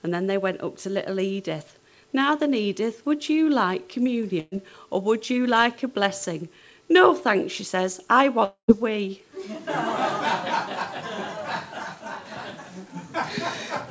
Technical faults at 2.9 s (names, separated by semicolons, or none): none